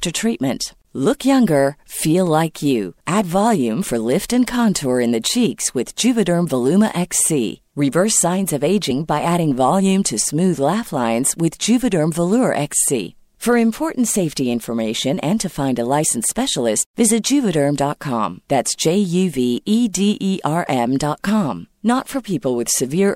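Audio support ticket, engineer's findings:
Compressed frames skipped at 16.03 s in the speech: short smeared blip where about one frame, roughly 30 ms, drops out. Frame size points to 26.1 ms frames. Decoder lost or rejected a damaged frame. Overlapping neighbours soften the jump, so no hard click.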